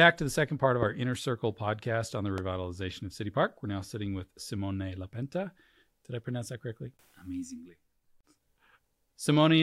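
A loud pop hits at 0.83–0.85 s, then another at 2.38–2.40 s. Each is a single sharp click, well above the speech, which carries on underneath. A voltage spike is the likely cause.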